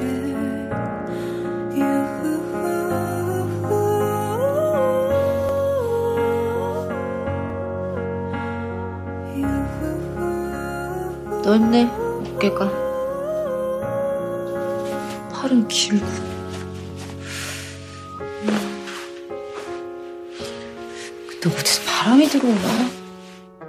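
Small forward jumps at 5.49, 7.5 and 16.9 s, likely dropped buffers (overrun): roughly 30, 30 and 10 ms of audio lost, with the two sides spliced directly.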